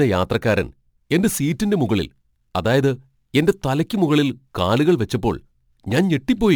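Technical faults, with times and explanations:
Throughout, crude rate conversion: a gritty, inharmonic fizz, roughly 30 dB below the speech, tracks its louder, brighter moments. This points to 44.1 kHz audio taken to 48 kHz by repeating nearest samples, unfiltered. Unlike steady hiss, it vanishes in pauses.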